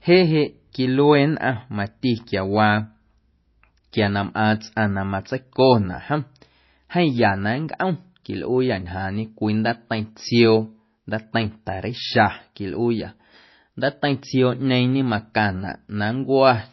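From start to end, the speech has plainly audible codec damage, likely from MP3 compression. Nothing is present above 5.8 kHz. The encoder has removed the treble at a fixed cut-off, so the sound is dull and muffled. Weak frequency lines drop out and return from frame to frame, giving a watery, swirling texture. S sounds turn metallic and chirpy. Attacks are smeared. This degree of damage fits a very low bitrate, around 24 kbps.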